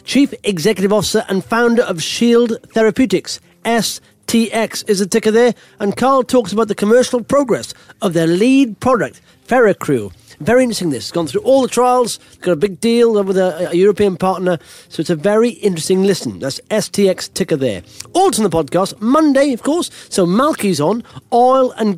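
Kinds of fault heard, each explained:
No faults turn up anywhere in this one, so there's nothing to list.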